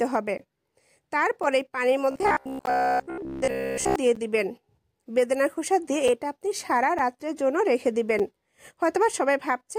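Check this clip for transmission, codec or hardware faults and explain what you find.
Two faults are present: repeated blocks of digital silence and a stretch of robotic, buzzing sound from repeated short buffers.

Block of digital silence, at 0.38, 1.43, 2.66, 4.15, 6.08, 6.99 and 8.19 s. The output buffer most likely wasn't filled in time, so the samples went out as zeros. The gaps last about 18, 2.6, 16, 10.7, 5.3, 5.3 and 5.3 ms. The 10.7 ms gap fits a 512-sample buffer and the 5.3 ms ones a 256-sample buffer. Each cut to zero and back is abrupt, with no fade, so the shortest gaps sound like ticks and the longer ones like brief holes.

Robotic sound from repeated short buffers, from 2.11 to 3.96 s. Fresh audio was likely arriving too seldom, so the software kept replaying its last chunk of about 15 ms and skipped most of the real signal in this stretch. That fixed repetition imposes a buzz at about 67 Hz, giving the sound a stiff, metallic drone that only loosely tracks the underlying audio. 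One of the silent blocks, at 2.66 s, falls inside this stretch.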